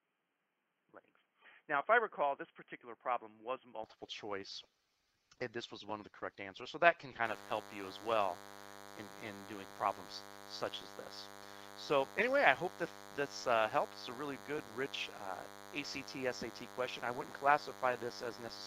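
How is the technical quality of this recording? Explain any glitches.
The technical quality is held back by two faults, one at the start and one running to the end. From 0 to 3.84 s the sound is dull and boxy, with nothing above 3.2 kHz, a level about 5 dB lower, and its own faint noise floor roughly 45 dB down. It then clears at once, with no gap. This is likely an input switched to a poorer device. The change in tone, level and noise together sets it apart from a plain low-pass filter. From 7.25 s to the end, a DECT cordless phone buzz sits about 20 dB below the sound. A nearby DECT unit sends radio bursts every 10 ms, and the audio circuit rectifies them into a thin 100 Hz buzz rich in harmonics. It sounds harsher and more rasping than smooth 50 or 60 Hz mains hum.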